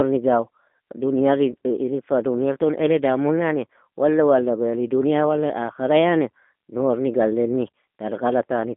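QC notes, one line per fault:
throughout G.729 codec: The speech is carried through a low-rate CELP coder, which fits 8 kbit/s G.729A, and rebuilt from a vocal tract filter, a pitch predictor and sparse pulses. This gives a plainly rough, synthetic edge, with the band held to roughly 200 Hz to 3.6 kHz.
1.51–1.54 s VoIP packet loss concealed by the speech codec: Audio went missing, which fits a single lost 10 ms frame, and the decoder filled the gap by extending its last pitch and filter at falling gain. This gives a brief stretched, fading sound, and the voice stays weak or distorted for tens of milliseconds or more after about 1.54 s while the decoder recovers.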